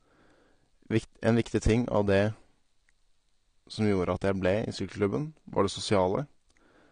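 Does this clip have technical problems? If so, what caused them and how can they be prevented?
Yes. The whole clip shows AAC compression damage, and it's plainly audible: the speech sounds dull, with nothing above about 9.9 kHz, and the sibilants and sustained sounds take on a smeared, warbly, fizzy edge. The likely cause is a low-bitrate AAC-LC encode, something in the region of 32 kbps, where the encoder cuts the top end and leaves gaps in the spectrum to save bits. To prevent it, encode at a higher bitrate or keep a lossless master and only compress once at the end.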